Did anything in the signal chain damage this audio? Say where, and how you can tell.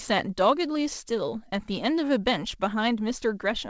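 No, nothing damaged this audio.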